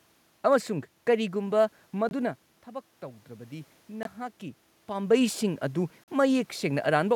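Short silent gaps cut the speech at 2.09 to 2.13 s, 4.03 to 4.07 s and 6.04 to 6.09 s. Each is likely a Bluetooth dropout: late packets were discarded, and the sound resumes further on.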